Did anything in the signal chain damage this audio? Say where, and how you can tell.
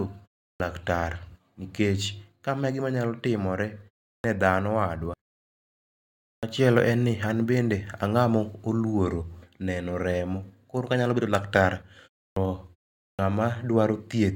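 Yes, at playback. There's a clipped start after a pause at 0.53, 4.18 (just ahead of "dhano wadwa"), 6.37, 12.3 (after "bedo laktar") and 13.13 s. The output device sleeps through each gap and eats the first 58 to 70 ms while it wakes.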